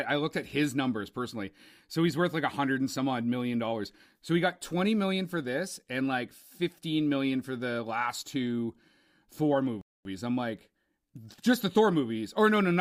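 At 9.81 s the speech drops to silence for about 0.24 s, then resumes exactly where it stopped: a rebuffering stall, where the player ran out of downloaded audio.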